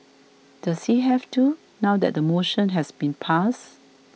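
No technical faults can be heard anywhere in the recording.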